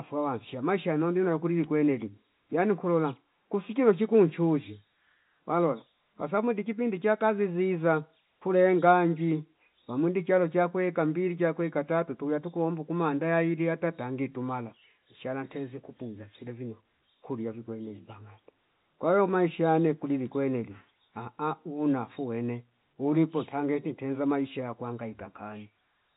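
No technical faults can be heard in the speech. The sound carries the narrow band of G.711 telephone coding, with nothing above 3.8 kHz, which fits an A-law line at 64 kbps.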